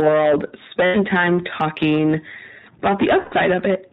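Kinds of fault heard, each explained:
Hard clipping: the speech is driven about 16 dB past full scale, so roughly a tenth of the samples are flattened, giving harsh fuzz on every loud syllable.
iLBC codec: narrowband VoIP coding of 20 ms frames, probably around 15 kbps; nothing above 4 kHz survives, and the voice sounds plainly rough and synthetic.
Lost iLBC frames: at 0.86 s and 3.22 s, gaps of about 80 and 100 ms get filled with a held, buzzy vowel-like sound, then the voice snaps straight back.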